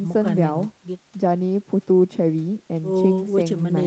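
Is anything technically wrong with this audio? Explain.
No, nothing is technically wrong.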